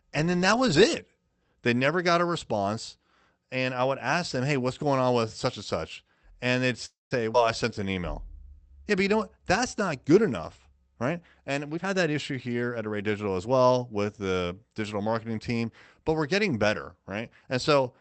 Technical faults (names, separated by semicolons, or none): call audio freeze; skip ahead; jitter buffer slow-down; jitter buffer speed-up